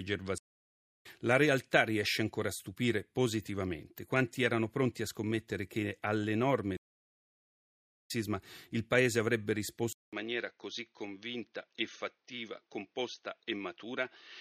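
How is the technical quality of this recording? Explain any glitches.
The recording has two clear stream interruptions and, near the end, a lasting drop in fidelity.

The stream reconnects twice. From 0.38 to 1.06 s there is about 0.64 s of silence, and from 6.77 to 8.11 s about 1.3 s after "a scommettere che all'enorme". Each time the connection drops, the player restarts its decoder, and the speech resumes roughly half a second and one second later respectively, at "il paese avrebbe" the second time. The skipped material is what separates this from a simple dropout, which only leaves a gap.

At 9.93 s, just after "il paese avrebbe", a 200 ms silence is followed by sound that stays duller until the end. Nothing remains above 6.4 kHz, the level falls by about 5 dB, and a new noise floor sits about 50 dB below the signal. The likely cause is the input switching to a poorer device. A codec low-pass would narrow the band without the accompanying gap, level shift and change in background noise.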